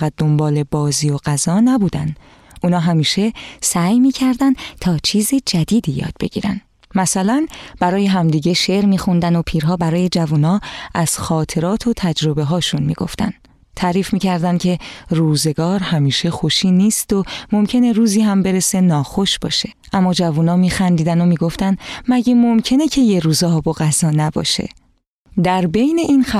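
The sound jumps abruptly sharp, running fast and about a semitone high, from 3.67 to 5.84 s and again from 8.50 to 10.36 s, then drops flat and slow from 15.77 to 16.54 s before snapping back each time. These are drift correction steps, likely from clock-matching software changing the playback rate in a single jump of 6.35% to refill or drain its buffer. The pitch moves by 107 cents upward and 114 cents downward as a result.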